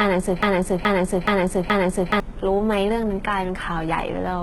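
From the start, the speech shows heavy codec damage of the kind HE-AAC compression leaves behind. Nothing is present above 11.8 kHz, and the upper band sounds synthetic: s sounds come out gritty and lispy, with a metallic edge. The likely cause is treble rebuilt by spectral band replication from copied lower bands at a bitrate around 16 kbps.

From 0.43 s to 2.2 s, a broken-record loop takes over. A fragment of about 0.42 s repeats exactly, back to back, four times, and the speech that belonged in that span never plays. A playback or streaming stall that kept resending its last buffered fragment is the likely cause.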